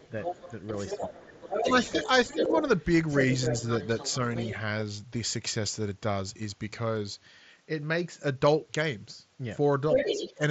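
Speech over what sounds like a wideband Bluetooth headset link (mSBC band-limited at 8 kHz), with the other side's voice leaking through from 0.0 to 2.57 s, 3.08 to 4.52 s and 9.92 to 10.34 s. Likely cause: loudspeaker echo left by the echo canceller. It sits a few dB below the talker in the first two stretches and about level with it in the last. On a spectrogram this shows as a second, overlapping harmonic pattern. Speech suppressed in double talk hits 0.94 to 2.56 s, dipping by around 10 dB for under a second in total, and 10.13 to 10.4 s, dipping a few dB. This is likely the canceller ducking both voices at once, which appears as notched-down envelope segments in the waveform. Concealed Bluetooth headset packet loss at 2.45 s fills a gap of about 7.5 ms, consistent with one lost frame, using repeated waveform. It is nearly inaudible, appearing only as a tiny periodic splice in the waveform.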